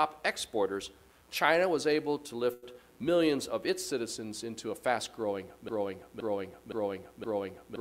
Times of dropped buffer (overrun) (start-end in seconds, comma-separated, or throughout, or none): none